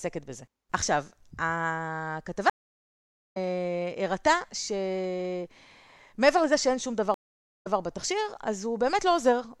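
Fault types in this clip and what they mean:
Stream reconnect: the connection dropped, so the player stalled, reconnected and started a new decoder partway through the stream, which leaves a gap followed by a jump in the speech. At 2.50 s the audio falls silent for 0.86 s, then resumes roughly a second further on, skipping a stretch. At 7.14 s a 0.51 s silence ends with playback restarting 131 ms earlier, so a short slice is heard twice.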